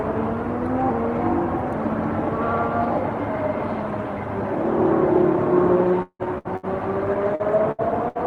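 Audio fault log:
6.02 to 6.66 s, repeated packet loss (robotic sound): four gaps, the longest 171 ms, kept being patched by extending earlier sound, so nearly half this stretch is filled in, choppy and robotic.
7.35 to 7.43 s, short concealed packet loss: about 40 ms never arrived and was covered by continuing the preceding sound, heard as a brief smear before real audio resumes.
7.40 s, lost packet rebuilt from error correction: one 20 ms packet was restored from the low-bitrate copy in the next packet, so there is no hole, just a rougher, noisier moment.
7.72 to 7.81 s and 8.08 to 8.18 s, burst of packet loss: roughly 60 ms went missing each time, concealed by holding and fading the last sound, so each becomes a dying buzz or hiss and the audio jumps ahead.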